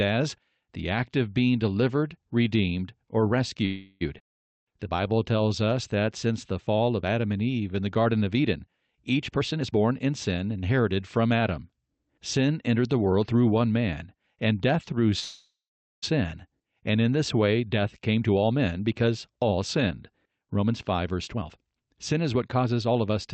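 Call audio freeze at 3.65 to 4.03 s, right after "being delivered redeemed or": packets were likely held up, the jitter buffer ran dry, and the receiver stretched the last sound into a fading buzz for about 0.35 s. The speech then resumes where it stopped, so a gap is inserted and nothing is lost.

Jitter buffer slow-down from 4.52 to 6.71 s: to rebuild its reserve, the receiver repeats single pitch periods and slivers of pauses, adding 193 ms. The speech runs at 92% speed with unchanged pitch, so sounds drag.

Jitter buffer speed-up from 9.28 to 10.85 s: the buffer held too much audio, so short pitch-period pieces are cut out, roughly 0.4 s in all. The speech runs at 122% speed with unchanged pitch and sounds rushed.

Call audio freeze at 15.19 to 16.04 s, after "man and death through": again likely a stall of late packets. The fill lasts about 0.83 s, with the buzz fading out and the last 0.5 s silent before the speech picks up without loss.

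Jitter buffer speed-up from 17.6 to 23.1 s, starting after "and in this": roughly 0.7 s is trimmed away, and the speech is hurried at 115% speed, pitch unchanged. Through the Opus call path, the audio tops out at 8 kHz.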